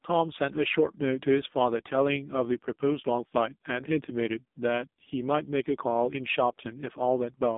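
Thin, buzzy, synthetic-sounding speech runs for the whole clip: the AMR narrowband mobile codec (AMR-NB) cuts everything above 3.8 kHz, leaves a 200 Hz to 3.7 kHz phone band, and its heavy damage points to one of its lowest bitrates, around 5 kbps.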